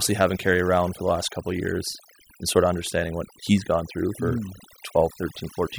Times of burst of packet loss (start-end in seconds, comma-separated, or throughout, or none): none